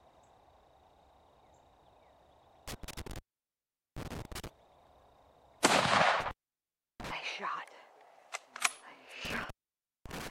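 A recording with intermittent contact: the signal drops out three times, around 2.68 to 4.48 s, 6.20 to 7.11 s and 9.25 to 10.31 s, each with crackle at the edges and gaps of about 0.78, 0.69 and 0.55 s with faint hiss. That points to a loose cable or plug briefly breaking the connection.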